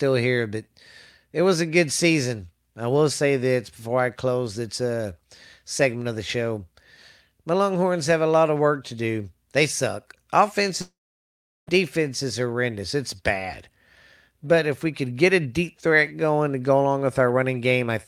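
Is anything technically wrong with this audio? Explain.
Yes. A long network dropout, from 10.81 to 11.69 s, is the likely cause of a gap in the speech. About 0.86 s of audio never arrives, and the receiver stretches the last sound into a brief fading buzz. Roughly 0.75 s of silence follows before the speech returns at "defense is horrendous", with the lost stretch simply gone.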